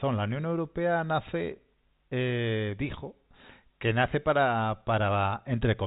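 No technical faults are audible.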